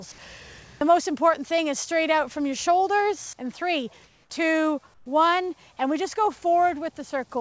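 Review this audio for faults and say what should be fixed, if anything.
Discontinuous transmission likely cut in during two quiet gaps, so the receiver filled them with comfort noise in place of the background: 4.04 to 4.30 s (260 ms) and 4.94 to 5.06 s (120 ms). The real background, about 40 dB below the loud parts, gives way to a flat, featureless hiss, about 3 dB and then about 7 dB quieter, against the call path's band that stops at 8 kHz. Disabling DTX on the sender, or raising its voice detector's sensitivity, would keep the true background.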